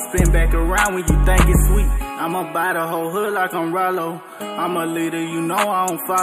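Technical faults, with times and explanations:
Throughout, channel delay (comb filtering): one channel lags by roughly a tenth of a millisecond before mono summing, carving evenly spaced notches from around 5 kHz upward, leaving the top end hollow and dulled.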